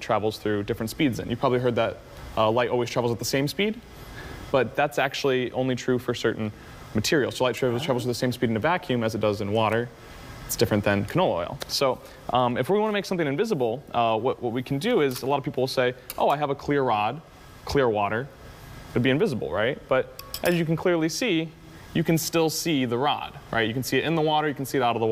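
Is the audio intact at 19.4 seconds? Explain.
Yes, the audio is intact at 19.4 seconds, with no dropout, click, distortion or other fault audible at that moment.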